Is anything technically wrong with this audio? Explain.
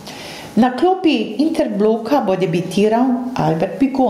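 Yes. Throughout the speech there is gain pumping: loud and soft parts end up closer in level, with the level swinging by around 20 dB, so everything sounds squashed. The likely cause is input gain set far too high, with a fast limiter clamping down on each peak.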